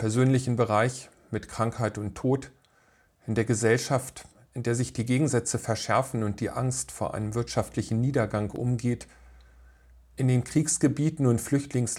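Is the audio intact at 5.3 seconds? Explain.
Yes, at 5.3 seconds the audio is intact, with no dropout, click, distortion or other fault audible at that moment.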